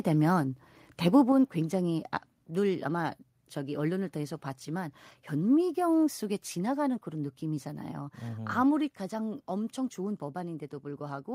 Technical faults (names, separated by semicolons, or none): microphone volume stepped down